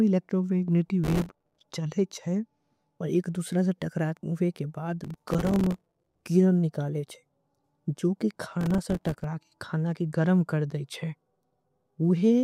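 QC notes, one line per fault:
1.04–1.61 s, processor overload crackle before "चलेच है और". The processor misses its deadline on dozens of tiny buffers in a row, each only a few milliseconds long. Each miss drops to silence with hard edges, so the gaps merge into a gritty crackle.
5.04–6.21 s, processor overload crackle before "गिरन निकालेच है जो". This is the longest burst. Around a hundred short silent gaps pile up. The speech tears and sputters until the load eases.
8.61–9.24 s, processor overload crackle between "निकालेच है जो के" and "खाना के गरम कर". A shorter run of missed buffers chops the sound into rapid clicks, then stops cleanly.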